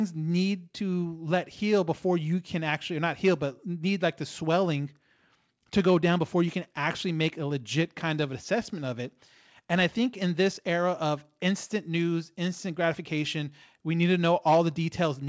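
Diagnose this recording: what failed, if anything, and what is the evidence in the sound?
Nothing failed: the speech comes through the call path intact, with no content above 8 kHz, which fits a wideband codec such as G.722.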